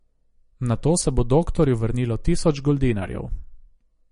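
Throughout the speech, the treble stops abruptly at 10.6 kHz, and the sound is watery and swirling with smeared consonant attacks. This is likely MP3 compression at a starved bitrate, which fits roughly 40 kbps. A spectrogram shows a hard flat ceiling and weak bands flickering on and off.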